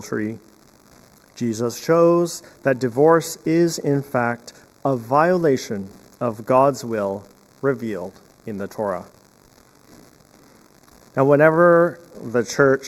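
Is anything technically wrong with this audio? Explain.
Yes. Channel delay (comb filtering) runs throughout the clip: one channel arrives a fraction of a millisecond late, around 0.15 ms, and the mono sum cancels shared content at evenly spaced frequencies, starting near 3 kHz. The result sounds hollow and phasey, with fixed notches in the upper range.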